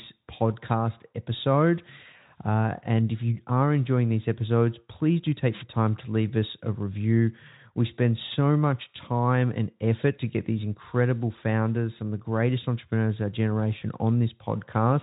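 A brief swish of static is heard at 5.51–5.64 s and, more briefly, at 8.31–8.36 s. These are wireless microphone noise hits: reflections cancel the FM radio signal and receiver noise swells. At 13.79–13.83 s the speech smears into a short, buzzy tone or coloured noise that fades, with the voice weak just after. This is VoIP packet loss concealed by the speech codec, the decoder extrapolating across a gap that fits one lost 20 ms frame.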